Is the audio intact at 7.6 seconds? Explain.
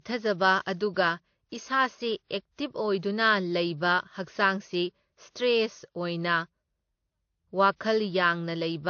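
No. At 7.6 seconds, as throughout, the speech has nothing above 6.6 kHz and carries two overlaid textures of compression artefacts. This is likely transcoding between lossy codecs: a low-rate AAC-style encode re-coded by WMA, whose bits get spent on the earlier artefacts. Unlike a single codec, the artefacts stack.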